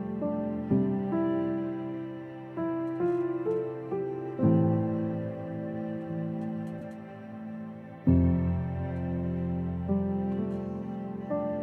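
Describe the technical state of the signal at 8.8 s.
At 8.8 s the signal is intact, with no dropout, distortion, glitch or other technical fault audible at that point.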